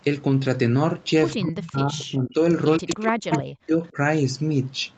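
Speech suppressed in double talk, from 1.35 to 2.41 s, pulls the speech down by as much as about 25 dB, likely because the echo canceller could not tell the near talker from loudspeaker echo while both sides spoke. Echo leak at 1.59 to 1.70 s and 2.74 to 2.96 s adds a copy of the speech 123 ms late, about 15 dB and 10 dB below the speech, probably residual loudspeaker pickup the canceller missed. The suppression returns from 2.79 to 3.97 s, deeper at up to about 40 dB. A last echo-leak scrap at 3.30 to 3.41 s is the loudest of the three and sits only a little below the speech.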